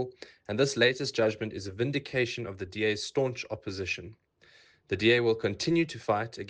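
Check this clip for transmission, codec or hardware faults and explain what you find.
I found no faults in this clip.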